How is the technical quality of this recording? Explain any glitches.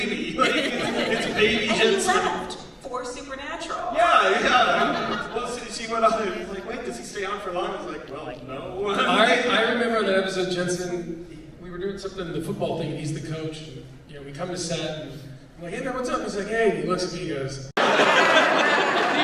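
No glitches or faults detected.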